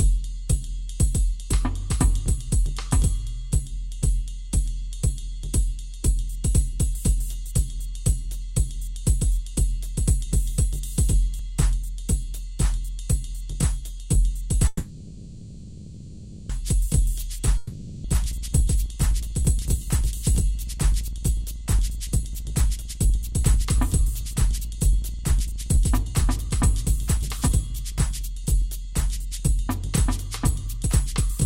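A call audio freeze runs from 14.67 to 16.51 s. The last sound is stretched into a fading buzz for 1.82 s, and the audio then resumes where it stopped. Delayed packets likely emptied the jitter buffer. At 17.57 s a long network dropout begins. A fading fill lasts until 18.06 s, and the audio returns with about 0.8 s lost, likely from packets that never arrived. A jitter buffer speed-up follows from 18.09 to 31.38 s. The audio plays at 110% speed with unchanged pitch and sounds hurried, as short pitch-period pieces are removed to trim about one and a half seconds of built-up delay.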